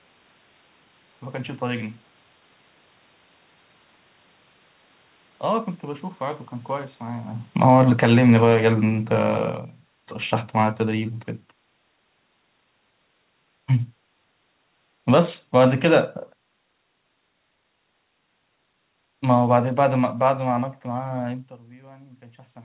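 Automatic gain falling at 7.46 to 9.44 s, 13.71 to 16.08 s and 19.23 to 21.28 s: the gain control judged the input too loud or its background noise too strong and eased its gain down, by about 8, 3 and 4 dB, so the speech and room noise sink together.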